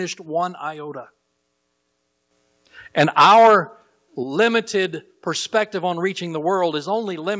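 At 2.31 s the microphone volume is stepped up by about 8 dB, so the speech and background jump in level together. From 2.99 to 3.56 s the loudest syllables turn harsh and crackly, with peaks about 11 dB over the converter's limit and roughly a tenth of samples flattened, likely microphone overload at the converter. At 3.22 s and 4.23 s the level drops abruptly by about 2 dB and about 7 dB, a microphone volume step down likely triggered by the clipping. A brief crackle at 4.41 to 4.43 s, about 2 dB over with a small share of samples cut, points to a likely second overload.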